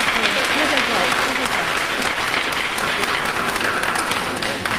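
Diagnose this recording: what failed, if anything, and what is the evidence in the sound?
Periodic clock jitter at the converter: throughout the clip, a clock wobble of around 1 kHz adds a rough, metallic edge. On a spectrogram, every component carries sidebands spaced about 1 kHz above and below.

Call bitrate drop in the codec: from 1.28 s to the end, the encoder falls from 64 to 17 kbps and never recovers. The spectrogram turns visibly coarser from that point.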